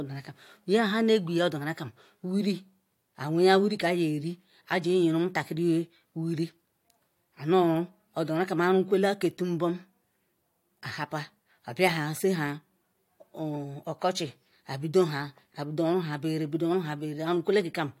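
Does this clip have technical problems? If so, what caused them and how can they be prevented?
No, nothing technical goes wrong in this speech recording, so there's nothing to trace back or prevent.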